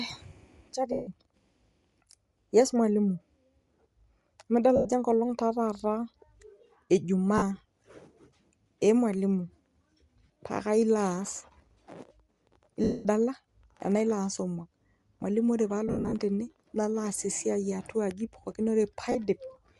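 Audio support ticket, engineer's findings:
Grainy, breathy edge on the speech across the whole clip, upper band sounding noise-filled rather than clean. Likely Bluetooth LC3 compression at a modest rate, something like 48 kbps, with 10 ms transform frames thinning the top end.

Lost LE Audio frames: noisy smeared patches at 0.92–1.07, 4.76–4.85, 7.38–7.43, 10.26–10.36 (scattered, short runs), 12.84–13.06, 15.88–16.15 (scattered, longest run ~70 ms), 19.12–19.16 s. Decoder repeating the last spectrum with random signs and fading it on the longer gaps.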